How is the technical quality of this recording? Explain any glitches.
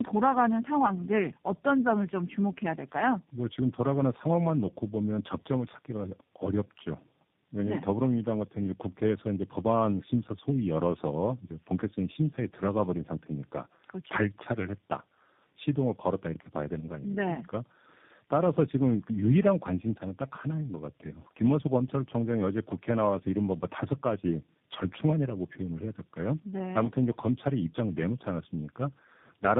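The recording is degraded throughout by tandem speech coding. Across the whole clip the speech sounds rough, muffled and warbly, with nothing above about 3.8 kHz. The character fits about three speech coders in a row, likely AMR-NB, CVSD and finally G.729A, joined by G.711 links. Each coder was fed the previous one's already damaged output, so its errors stacked on errors it did not create. That compounding makes the speech harsher and more smeared than any single codec would.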